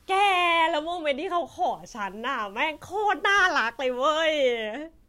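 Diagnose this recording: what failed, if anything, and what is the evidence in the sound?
From 1.67 to 4.65 s the speech turns grainy, with gritty distortion that tracks the voice and quiet tails sputtering, likely low bit depth without dither from a sample-format conversion that truncated to about 9 bits. The error sits roughly 40 dB below the signal, showing as signal-following broadband haze on a spectrogram and visible stair-stepping on a zoomed waveform.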